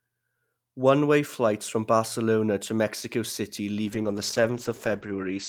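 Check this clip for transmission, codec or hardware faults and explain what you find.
There's one fault here, a call bitrate drop near the end. From 3.87 s to 5.49 s the bandwidth estimate collapses and the encoder goes from 48 kbps to 12 kbps, so the speech is coded much more coarsely and the top end is cut from 20 kHz to 8 kHz. The last stretch sounds muffled, rough and watery.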